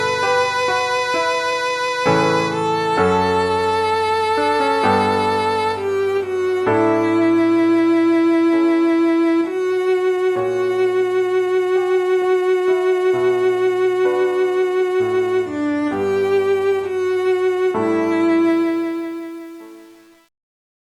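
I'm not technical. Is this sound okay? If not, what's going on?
No. The fade-out at the end, from 18.50 s, has truncation distortion. The volume drops with too little detail kept, which fits an 8-bit stage. From 18.87 s to the end the quiet tail turns gritty.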